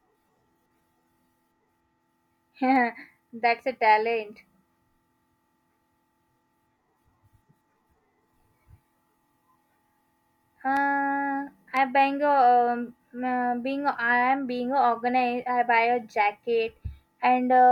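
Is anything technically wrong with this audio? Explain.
Yes. Periodic USB or driver dropouts run from 0.75 s to 11.77 s, once every 1.0 s, about ten in all. Something blocks the audio path each second. Roughly half a millisecond of speech becomes silence. Each gap that lands on speech sounds like a small regular tick.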